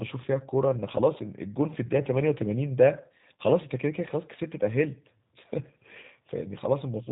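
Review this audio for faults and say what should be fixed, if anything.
The speech is band-limited throughout, with nothing above 4 kHz, and has the slightly rough, synthetic texture typical of the G.729 codec. The damage is plainly audible and fits an 8 kbit/s stream. The decoder rebuilds each 10 ms frame from a vocal tract filter, a pitch predictor and a few pulses, so fine waveform detail and the upper band are discarded. Prevent it by carrying the call on a wideband codec such as G.722 or Opus at a higher bitrate.

VoIP packet loss concealed by the speech codec occurs at 1.18–1.22 s, 3.38–3.41 s and 6.01–6.05 s. Each event lasts about 30 to 45 ms and fits a single lost 20 ms packet. At each point the decoder fills the gap by extending its last pitch and filter state at falling gain, which gives a brief stretched patch that fades. Because each frame depends on the previous one, the speech stays weak or distorted for a short time after the gap. 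Prevent it by fixing the network loss or adding jitter buffering and forward error correction.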